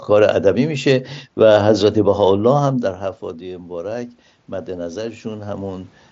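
At about 2.5 s the talker moves away and the voice drops well below its earlier level. From 3.20 s to 5.96 s, automatic gain rising follows. The gain control hears a quieter input, down by about 15 dB, and slowly pushes its gain up by about 6 dB. Voice and room noise swell together over those seconds. The rise only partly makes up the loss. The mSBC headset codec passes nothing above 7.7 kHz.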